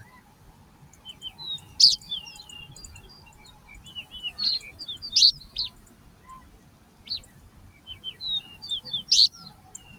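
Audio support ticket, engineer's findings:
Pumping and fluttering level across the whole clip. Held material and decay tails sink, attacks punch through, sound thins out between hits. Gain swing of around 20 dB. Probable component: a noise suppressor meant for speech, left engaged on non-speech audio. Mechanism: steady tones, ambience and reverb read as noise and get attenuated, while transients pass.

Sound cut by the noise suppressor, four spots. Level sags by about 6 dB at 0.05–1.05 s, 5.78–6.28 s, 6.56–7.03 s and 7.34–7.86 s. The dip at 7.34 s is brief, the others longer. Same noise suppressor. Mechanism: sustained or fading content in these stretches misjudged as noise, pulled down harder than surrounding material.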